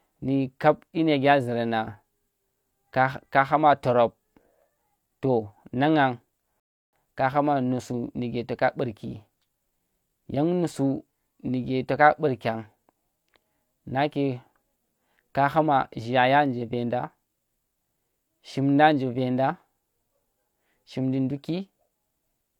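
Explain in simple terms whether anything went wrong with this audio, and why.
One glitch: a rebuffering stall at 6.60 s. The player ran dry, the speech goes silent for 0.33 s, then picks up exactly where it stopped.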